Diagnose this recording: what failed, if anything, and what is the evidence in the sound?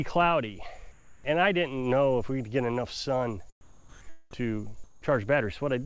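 Sound dropped by the voice detector, 0.92 to 1.24 s: call processing likely mistook sound for background, replacing 320 ms with steady comfort noise and losing 140 ms.

Comfort noise in place of the background, 3.61 to 4.01 s and 4.84 to 5.02 s: the sender likely stopped transmitting, so featureless synthetic noise, about 2 dB louder then about 2 dB quieter, replaced the real background.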